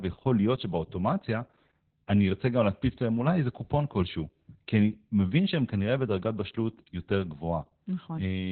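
From start to finish the speech carries heavy Opus voice compression: nothing survives above about 4.3 kHz, so it's muffled, hoarse and a bit robotic. That narrowband SILK sound, with coarsely coded excitation, points to a bitrate down around 8 kbps.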